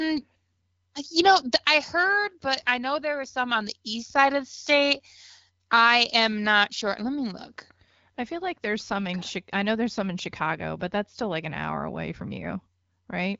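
No technical faults can be heard anywhere in the speech. The audio carries the AMR wideband (HD Voice) codec, with only light coding texture and nothing above about 7.6 kHz, which fits its 12.65 kbit/s mode.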